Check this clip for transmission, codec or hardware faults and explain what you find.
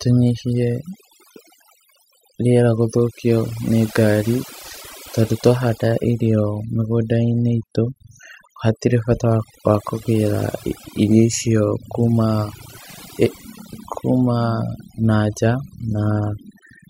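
One fault runs through the recording. Overdone noise removal throughout: an aggressive denoiser cuts frequency bands near its noise estimate, taking quiet speech detail too, leaving twinkling near-silence.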